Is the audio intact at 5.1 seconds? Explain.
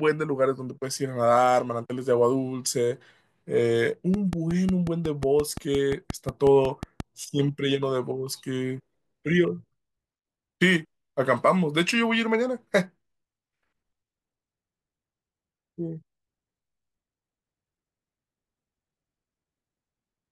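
No. At 5.1 seconds the speech sits inside a train of clicks running from 4.14 to 7.01 s. Something in the chain, likely electrical interference from nearby equipment or a faulty connection or power supply, is injecting a short pulse about 5.6 times per second at an even spacing. The result is around fifteen near-identical ticks, peaking roughly 10 dB above the speech, popping steadily over the talking and through its pauses.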